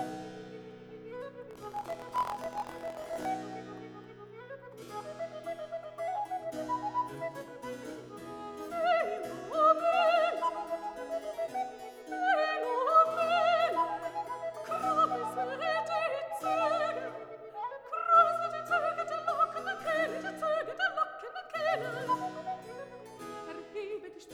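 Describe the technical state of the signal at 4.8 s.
Nothing at 4.8 s points to a technical fault; the signal is intact at that moment.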